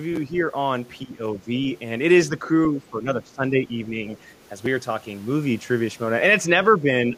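A speech recording whose level dips at 1.05–1.41 s, 2.71–3.95 s, 6.78–6.91 s and 7.08 s to the end. The first two dips are deep, around 15 dB. The last two are shallow. This is speech suppressed in double talk, likely from an echo canceller ducking the talker while the far side spoke. At 4.33–4.41 s, the other side's voice leaks through as a very faint scrap, far below the talker. The likely cause is echo the canceller did not fully remove.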